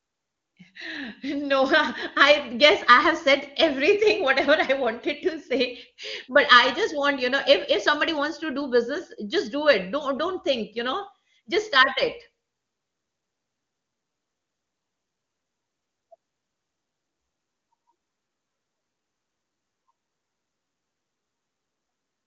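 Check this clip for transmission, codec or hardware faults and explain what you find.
No transmission, codec or hardware faults are audible in this speech; it passes through the AMR wideband (HD Voice) path at a rate consistent with its 23.85 kbit/s top mode, where any coding damage is faint at most.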